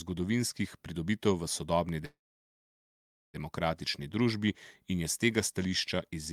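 Packets were likely delayed, emptying the jitter buffer: a call audio freeze at 2.05–3.37 s after "v sodobni", with a fading buzz, 1.17 s of silence, then speech resuming intact.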